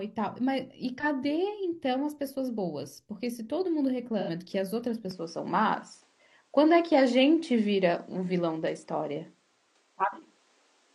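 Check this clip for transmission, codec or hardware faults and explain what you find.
Two kinds of fault turn up: brief AAC frame loss with concealment twice early on, then a drop in quality partway through that most likely comes from the input being switched to a poorer device.

AAC frame loss with concealment occurs at 1.00 to 1.05 s and again at 4.19 to 4.30 s. The decoder lost data and patched the gap by reusing the last good spectrum, with its energy carried over and its phase scrambled. The first patch lasts about 43 ms, which fits a single lost frame. The second runs about 85 ms, consistent with two consecutive frames. Each stretch of the speech sounds briefly smeared and noisy.

From 5.11 s to the end, the speech is band-limited, with nothing above 9.8 kHz, so it turns duller and loses its air. The likely cause is the recording's input being switched to a poorer device, whose narrower pickup cuts the top of the spectrum and adds its own faint noise floor, sitting roughly 40 dB under the speech. 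The change happens with no gap of silence and no real jump in loudness, so what marks the switch is the sudden loss of brightness.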